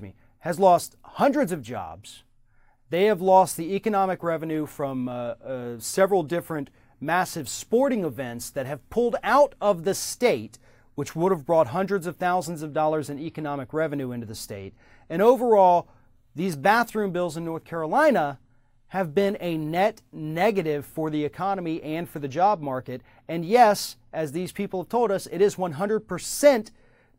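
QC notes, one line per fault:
No faults detected.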